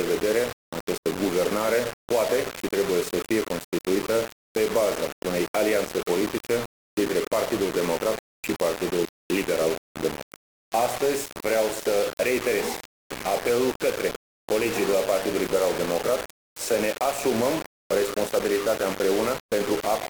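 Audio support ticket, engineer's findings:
Grainy, signal-tracking distortion throughout; quiet passages gritty, sputtering or dropping out. Likely low bit depth without dither: about 3 bits, rounded, error roughly 10 dB under signal.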